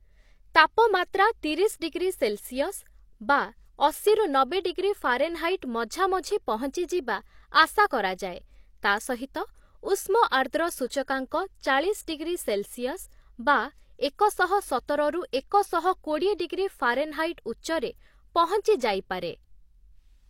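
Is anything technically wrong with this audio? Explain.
Yes. At 10.29 to 10.32 s there is pre-echo. The codec spread quantisation noise across a whole block, so noise meant for a sharp attack also filled the quiet 28 ms before it. The speech onset arrives behind a short hiss and sounds smeared.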